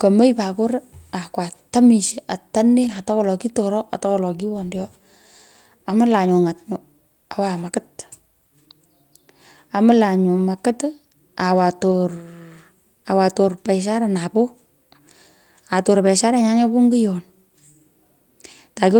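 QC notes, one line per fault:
2.83–2.97 s, lost packet rebuilt from error correction: a short rough, noisy stretch with no gap or repeated buzz, consistent with several lost packets replaced by low-bitrate backup copies.
11.91–11.93 s, lost packet rebuilt from error correction: a single 20 ms grainy blip, consistent with one packet rebuilt from its backup copy, so the sound continues without any dropout.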